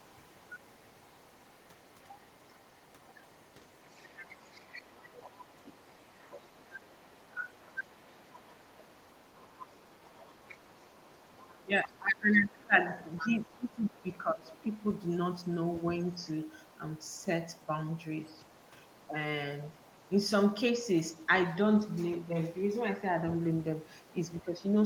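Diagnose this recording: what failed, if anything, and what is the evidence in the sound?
Call processing, specifically the echo canceller, lets the other side's voice leak through. A second, faint voice sits under the main speech from 0.05 to 11.65 s at about 30 dB down, again from 13.18 to 21.26 s at about 35 dB down, and briefly from 24.0 to 24.44 s. The likely cause is far-end audio from a loudspeaker reaching the microphone, with the canceller's adaptive filter failing to subtract it fully, so a residual copy survives.

The same stage also produces speech suppressed in double talk. The main talker's level dips whenever both sides are active: a shallow drop of about 10 dB at 7.86–7.93 s, a deep cut of about 20 dB lasting roughly three seconds from 11.65 to 14.78 s, a brief dip of about 10 dB at 22.18–22.34 s, and a slight one at 24.45–24.61 s. The likely mechanism is the canceller's suppressor misreading local speech as echo and attenuating everything.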